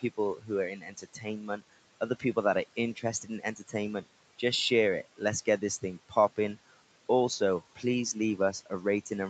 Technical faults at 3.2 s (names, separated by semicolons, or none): noise suppressor artifacts; speech cut by the noise suppressor